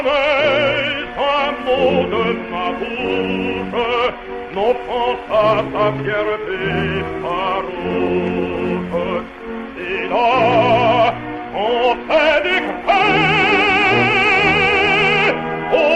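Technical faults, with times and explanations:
Nothing technical goes wrong anywhere in this audio, so there's nothing to list here.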